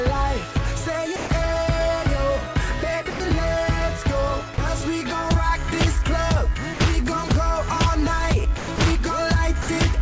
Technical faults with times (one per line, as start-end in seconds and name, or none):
1.16-1.30 sound dropped by the voice detector
3.10-3.20 sound dropped by the voice detector
4.54-4.58 sound dropped by the voice detector
6.74-6.80 sound dropped by the voice detector
7.28-7.30 sound dropped by the voice detector
8.58-8.78 sound dropped by the voice detector
9.62-9.68 sound dropped by the voice detector